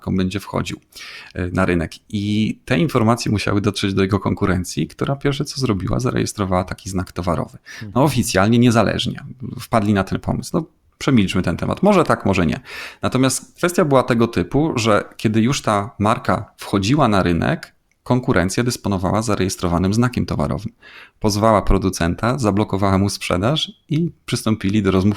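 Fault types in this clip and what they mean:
No faults can be heard anywhere in this recording.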